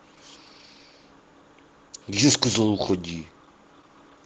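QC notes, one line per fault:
Throughout, Opus voice compression: the speech is plainly degraded, with a hoarse, slightly robotic quality in the lower band where a linear-prediction coder models the voice with a coarsely coded excitation. The top octaves come from a transform layer above 8 kHz, which fits a hybrid mode near 16 kbps. The band still reaches fullband instead of being cut off.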